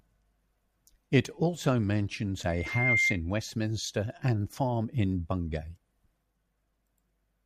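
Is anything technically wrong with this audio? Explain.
Yes. From 2.49 to 3.20 s, right after "also mentions", there is loudspeaker feedback squeal: the microphone re-captured its own loudspeaker, and loop gain at 2.1 kHz exceeded one. That tone swells over just under half a second into a piercing whistle about 5 dB above the speech.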